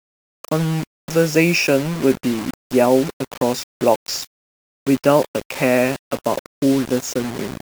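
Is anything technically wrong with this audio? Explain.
Yes. Throughout the speech there is low bit depth without dither, most likely from the samples being rounded to about 5 bits with no dither added. Each sample snaps to one of very few levels, so the rounding error tracks the waveform instead of forming a steady noise floor. The result is a grainy, gritty distortion roughly 15 dB below the signal that shifts with the voice, worst on quiet passages, where low-level sound sputters between adjacent steps or drops out.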